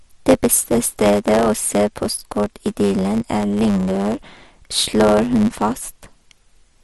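From start to finish the speech carries a block size mismatch (truncated): one stage hands over longer blocks, which fits 512-sample blocks, than the next stage reads, so each block's tail is discarded. The repeated splices produce a buzz at 100 Hz, and the speech runs about 1.07 times too fast. On a waveform, small jumps recur every 10 ms; a spectrogram shows thin vertical lines at that spacing, with energy stacked at multiples of 100 Hz.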